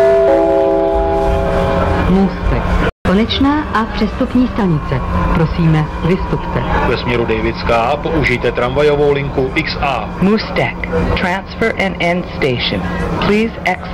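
At 2.90 s the sound cuts out abruptly in mid-flow and stays silent for about 0.16 s before resuming at 3.05 s. This is a playback stall. The gap is most likely the player running short of data, or its output thread being held up, so nothing reached the output until it recovered. Right after the gap, from 3.05 s to 4.61 s, everything plays quicker and sits higher, roughly a semitone and a half sharp, before settling back to normal speed and pitch. That is catch-up at higher speed. Having fallen behind during the stall, the player resamples its backlog to run 1.1 times faster, and because resampling changes rate and pitch together, the hurried stretch also sounds raised until the lost time has been made up.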